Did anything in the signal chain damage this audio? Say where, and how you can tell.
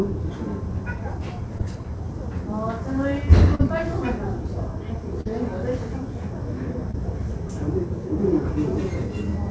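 Yes. Short concealed packet loss on the network leg of the call: 20 to 40 ms gaps at 1.58–1.61 s, 3.55–3.61 s, 5.21–5.27 s and 6.91–6.96 s. The receiver patched each gap by extending the preceding sound, so each one is a brief smear or wobble before the real audio returns.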